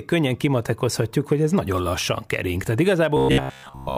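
From 3.17 s to the end of the clip at 3.98 s, the speech collapses into a rigid, metallic buzz pitched at about 66.7 Hz, loosely tracking the words. This is robotic sound from repeated short buffers, likely caused by audio arriving too seldom: playback loops a fragment of roughly 15 ms over and over, and since most of the stretch is repetition rather than fresh audio, the loop rate imposes that fixed drone.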